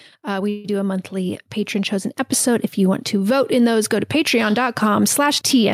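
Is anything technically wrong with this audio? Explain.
Yes, there are two kinds of fault.

From 0.49 to 0.66 s there is a call audio freeze, likely caused by packets being held up so the jitter buffer ran empty. The receiver stretched the last sound into a fading buzz for about 150 ms before "do a", then resumed where it stopped, adding delay without losing any speech.

The microphone volume stepped up twice. The call software judged the input too quiet and raised the device gain in single steps: about 2 dB at 1.17 s, between "we do a" and "patron chosen", and about 3 dB at 2.19 s, just after "patron chosen". Voice and background jump louder together each time.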